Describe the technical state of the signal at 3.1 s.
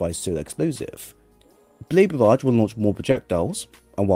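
At 3.11 to 3.16 s there is a short concealed packet loss. About 20 ms of audio failed to arrive in time, and the receiver covered it with roughly 30 ms of synthesized continuation, extending the preceding sound before blending back into the real signal. It comes across as a brief smear or wobble rather than a hole. That separates it from a plain dropout, which would leave an abrupt silence, and from a click, which has no stretched, continued texture.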